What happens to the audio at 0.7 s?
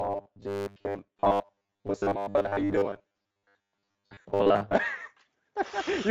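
At 0.7 s, robotic sound from repeated short buffers runs from 0.01 to 4.76 s. Most of the audio there is likely a repeated 10 ms slice, forcing a rigid 100 Hz metallic buzz. A spectrogram shows even 100 Hz harmonic stripes; the waveform repeats roughly similar cycles.

Throughout, the Speex codec damage is plainly audible as hoarse, noisy grit, consistent with a Speex mode near 16.8 kbps. Above 4 kHz there is only smeared noise fill.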